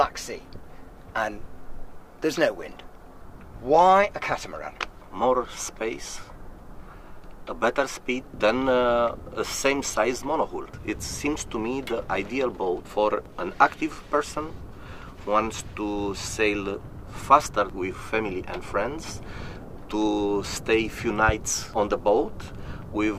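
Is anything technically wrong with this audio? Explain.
Yes. There is one loud pop, from 21.29 to 21.31 s. It is a single sharp burst lasting about 26 ms. It peaks well above the surrounding level, roughly 15 dB higher. The sound continues underneath it without a break. The likely cause is a sudden voltage step or pulse entering the chain, from a plug, a switch, static or a driver glitch. The downstream circuits shape that pulse into a brief thump-like click.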